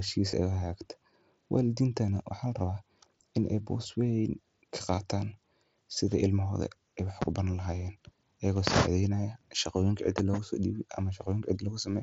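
At 0.31 s, 4.96 s and 10.32 s the speech has a tiny hiccup, each a concealed Bluetooth headset packet loss of about 15 ms, which points to a couple of voice packets dropping between headset and phone. The receiver papered over each gap by repeating the best-matching bit of the preceding waveform, so you just hear a brief buzzy smear and a slight warble as the real audio picks back up, all through the light graininess of the mSBC link.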